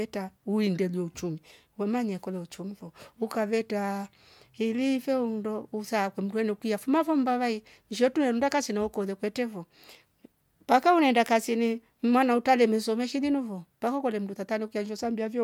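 Speech, with no audible faults.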